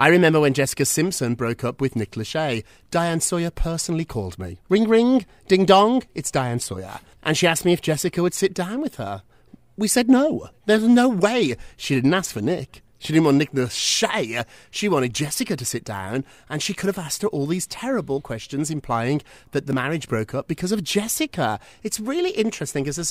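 It's a speech clip with one audible skip at about 19.73 s, right between "questions implying that the" and "marriage broke up because". Roughly 30 ms of audio drops out and the two sides butt straight together with no gap, so it sounds like a tiny jump rather than a pause. That's the signature of audio missing between chunks, likely from a recorder working in 10-second blocks and losing a sliver at the handover.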